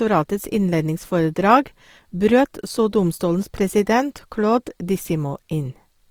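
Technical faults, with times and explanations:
Throughout, Opus compression: the speech sounds rough and grainy rather than swirly, with a noisy, hashy texture on sustained sounds, yet the top end stays open, with content reaching about 20.3 kHz. This is likely Opus in its fullband music mode, where the encoder holds each band's energy but fills starved bands with folded or noise-like content. The plainly audible damage fits a low rate around 24 kbps.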